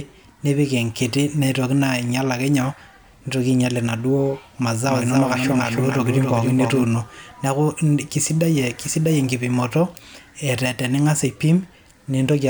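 A doubled audio track runs from 4.88 to 6.84 s in this speech recording. A second full-band copy of the speech trails the original by roughly 300 ms and sits around 5 dB lower. It has no decay or room colouring, and it switches in and out abruptly at both ends. The signal was likely captured twice, once through a slower path, so the two copies are summed out of step.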